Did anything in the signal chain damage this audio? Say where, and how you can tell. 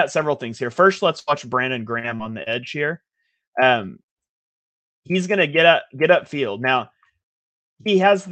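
Yes, the damage happened in the network stage of the call. At 1.19 to 1.30 s there is a burst of packet loss. About 80 ms of audio never arrived, and the receiver filled roughly 78 ms by extending the last sound while fading it down. The result is a held buzz or fading hiss, and then the speech resumes with a piece missing. On a spectrogram this shows as harmonics or noise frozen in place and dimming, with an abrupt jump where real audio returns. The waveform shows a decaying, overly regular stretch. It sits against the Opus codec's top edge near 8 kHz.

Short concealed packet loss follows at 1.99 to 2.07 s, 2.16 to 2.22 s and 2.43 to 2.49 s. Each is about 40 ms lost, patched with 30 to 43 ms of synthesized continuation and then blended back. Each one is heard as a brief smear or wobble, and a quick consonant can disappear. On a spectrogram these are short patches of smoothed, repeated pitch structure or shaped noise where fine detail vanishes. 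On the waveform they look like small copied-looking cycles with a crossfade seam.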